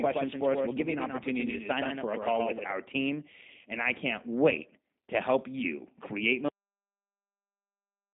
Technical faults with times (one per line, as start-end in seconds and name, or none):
0.00-8.13 G.729 codec
0.00-2.74 doubled audio track
6.48-8.13 cut-off end